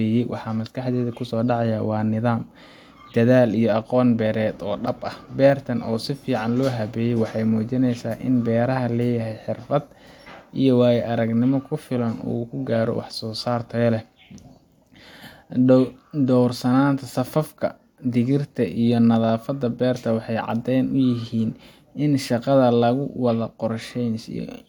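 Speech recording, with nothing technically wrong to report.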